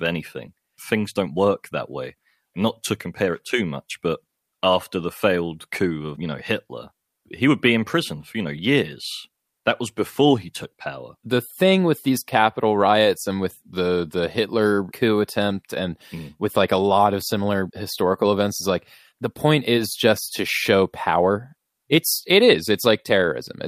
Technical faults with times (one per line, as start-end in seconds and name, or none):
0.00-23.68 clock drift between sender and receiver
0.14-23.24 repeated timing corrections